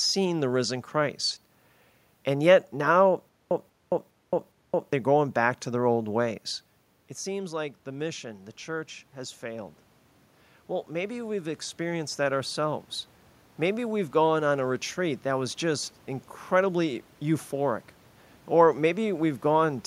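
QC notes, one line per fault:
7.25–9.84 s, automatic gain rising: after the talker moves away from the microphone at around 6.5 s, the input level falls by about 12 dB, and the gain control answers by slowly lifting its gain by about 5 dB over roughly two and a half seconds. Because the gain acts on the whole signal, the voice and the room noise behind it swell together, producing a gradual creep in loudness and background.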